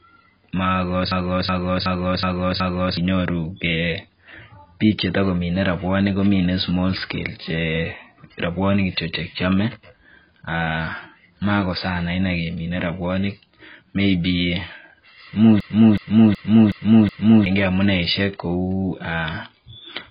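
Throughout the speech, nothing reaches above 5 kHz, leaving it dull and smeared, with a warbling, fizzy texture on sustained sounds and sibilants. This is likely heavy AAC compression at a very low bitrate, consistent with AAC-LC near 16 kbps, where the encoder drops high bands and quantises the rest coarsely.

A system hang loop runs from 1.12 to 2.97 s and again from 15.60 to 17.46 s. Each time, the machine froze while the sound hardware kept replaying one 372 ms stretch of its ring buffer, which fits a 16,384-sample buffer. That stretch repeats five times at 2.69 Hz, a skipping-record repeat that swallows about two seconds of audio.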